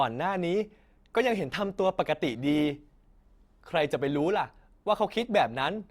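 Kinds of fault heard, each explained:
Adaptive stream at a lower bitrate: The speech starts out at higher quality, then at about 1.12 s the quality drops abruptly and stays down to the end, with no gap or dropout at the switch. That's the player falling back to a cheaper version of the stream when the connection slowed. Codec artefacts rise, which fits Opus stepping from roughly 64 down to 32 kbit/s.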